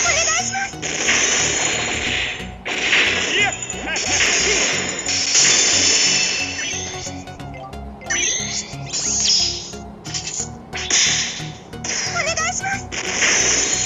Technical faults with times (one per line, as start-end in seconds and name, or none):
none